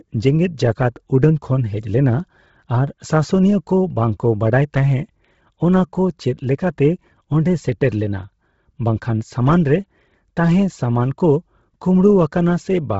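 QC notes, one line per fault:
Throughout: Bluetooth LC3 compression. The speech has heavy codec damage, with nothing above 7.7 kHz and a breathy, grainy upper edge where noise stands in for zeroed high bands. This is likely LC3 in 10 ms frames at a low bitrate near 16 kbps.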